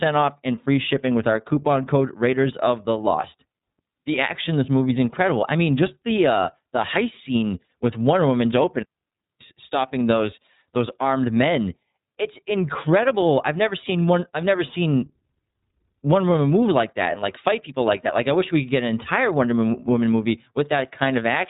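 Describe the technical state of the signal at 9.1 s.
At 9.1 s the signal sits inside a digital wireless dropout running from 8.83 to 9.41 s, a mute of about 0.58 s. The receiver lost too much data and silenced its output with a very short fade. The result is a clean hole of near silence with no noise burst on either side, ending just before "stopping those those armed". On a waveform it appears as a flat gap with steep edges, and on a spectrogram as a blank vertical band.

The same moment also carries the iLBC codec damage present throughout the clip. This narrowband coder handles the excitation of each frame independently, and the texture here fits 30 ms frames at a rate near 13.33 kbps. The speech around the gap sounds plainly rough and synthetic. A spectrogram shows a hard ceiling with nothing above 3.8 kHz.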